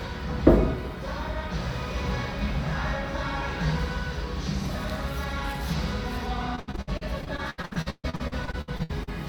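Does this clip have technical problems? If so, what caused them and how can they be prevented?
Yes. Repeated packet loss (robotic sound) runs from 6.55 to 9.09 s. Across those two and a half seconds the stream drops out about two dozen times, the longest hole lasting 136 ms. Each gap is papered over by stretching the last received sound forward, so roughly 39% of the stretch is synthetic fill. That turns the audio choppy, with pieces missing. A larger jitter buffer, forward error correction and a more stable network link would prevent it.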